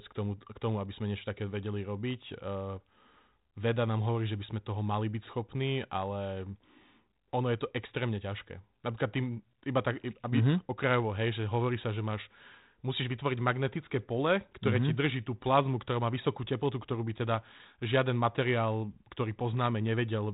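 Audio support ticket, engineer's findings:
No findings: no fault heard anywhere in the speech.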